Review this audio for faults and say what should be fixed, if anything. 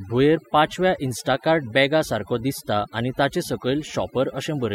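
Overdone noise removal runs through the whole speech clip. The gaps fall to near silence dotted with twinkling specks. That happens because bands sitting close to the noise estimate are cut away along with quieter vocal detail. Steady hiss or muffling would sound different, since what sets this fault apart is that flickering, bubbling residue. Setting the reduction more gently, with a proper noise profile, prevents it.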